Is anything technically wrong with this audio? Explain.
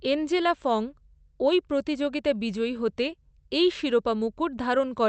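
No, nothing is technically wrong: the speech has the ordinary coding texture and a top end that stops near 8 kHz, which fits an Opus call path working as intended.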